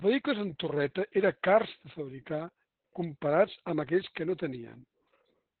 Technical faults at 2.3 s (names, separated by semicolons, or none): Opus voice compression